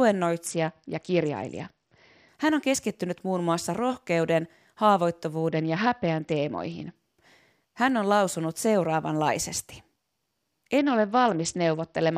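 Bluetooth SBC bit pool drops occur at 0.46 to 2.28 s, 5.49 to 6.96 s and 10.78 s to the end. Each time the encoder cut its bit allocation, starving the upper sub-bands. The treble dulls and gritty quantisation noise rises, which fits a bit pool falling from 31 to 8.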